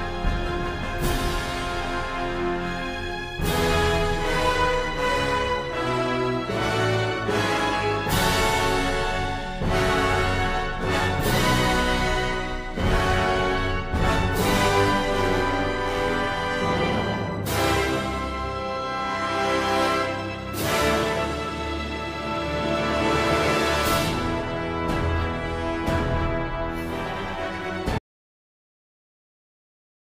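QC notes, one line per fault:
27.98 s to end: audio dropout to silence. The sound stops abruptly mid-flow and never returns, leaving a little over two seconds of silence with no room tone or noise floor underneath. That dead-flat tail points to the input being lost rather than the source falling quiet, likely a disconnected device, a broken link or an accidental mute while the recorder kept writing silence. Whatever occurred after the cut is gone.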